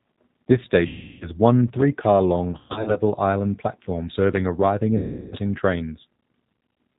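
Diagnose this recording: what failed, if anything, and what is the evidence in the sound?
The whole clip passed through the G.729 codec at 8 kbit/s (codec stage). The speech sounds rough and slightly synthetic, rebuilt from a filter, pitch predictor and sparse pulses. On a spectrogram, energy stops at a hard ceiling at 4 kHz, with smeared, grainy harmonics below it.

VoIP packet loss concealed by the speech codec (network stage) occurs at 0.87–1.29 s, 2.52–3.0 s and 4.98–5.36 s. The first and last gaps each lose about 340 ms, which points to 17 packets. The middle one loses 240 ms scattered over 440 ms, with a longest run of 120 ms. The decoder extrapolates from its last pitch and filter into a buzzy tone or coloured noise that fades, and the speech stays weak or distorted as frames rebuild. A spectrogram shows frozen, repeating harmonic stripes that dim.

Loose connector crackle (analogue wiring stage) appears at 1.68–1.83 s and briefly at 4.35–4.37 s. 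A worn contact making and breaking chops the signal, producing irregular scratchy bursts. The waveform shows jagged spikes and dropouts, and the spectrogram shows broadband vertical streaks.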